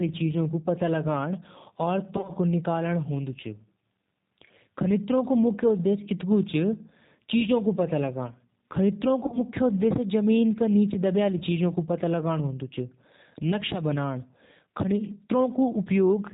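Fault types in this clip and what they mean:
G.729 codec: The speech sounds plainly rough, slightly synthetic and dull, with nothing above 4 kHz, because it is rebuilt from a vocal tract filter, a pitch predictor and a few pulses per 10 ms frame. This fits G.729A at 8 kbit/s.
VoIP packet loss concealed by the speech codec: From 2.17 to 2.33 s and from 9.24 to 9.39 s, the speech smears into a buzzy tone or coloured noise that fades, and stays weak briefly afterward. The decoder extrapolated its last pitch and filter to cover scattered lost packets.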